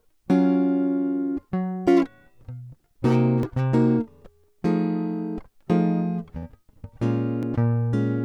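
A periodic USB or driver dropout in this music clip skips roughly a millisecond of audio once a second, from 1.43 s to 7.43 s, producing regular ticks.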